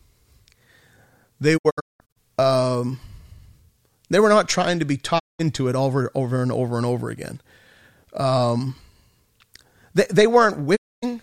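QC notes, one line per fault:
1.56–2.18 s, 5.18–5.41 s, 10.75–11.04 s: digital broadcast dropout. The receiver lost good frames and muted, fading over 20 ms. The first is broken holes, 384 ms gone across 576 ms. The second falls between "not trying to be" and "it over over and". Nothing sent is recovered.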